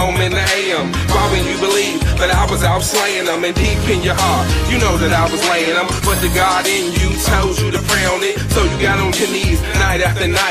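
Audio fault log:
No faults were found in the clip. Nothing calls for an entry in this log.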